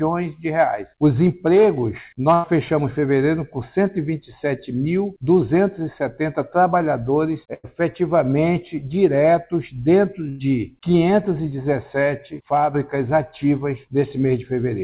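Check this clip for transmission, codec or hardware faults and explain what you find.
Three short dropouts stand out, heard through a telephone-band call path with nothing above 4 kHz.

At 2.34, 7.54 and 10.29 s, a burst of packet loss: roughly 0.1 s went missing each time, and the receiver stretched the preceding sound into a fading buzz or hiss before jumping ahead. On a waveform, each shows a decaying, repetitive stretch; on a spectrogram, smeared, fading bands followed by an abrupt change.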